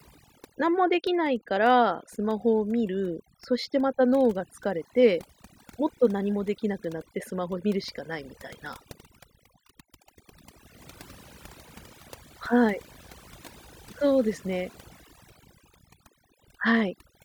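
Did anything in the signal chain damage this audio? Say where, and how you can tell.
Yes. Overdone noise removal in the call processing stage runs throughout the speech: bands near the noise estimate are gated away, so the background in the gaps drops and breaks up into twinkling specks. A spectrogram shows a blank floor dotted with isolated bright time-frequency specks.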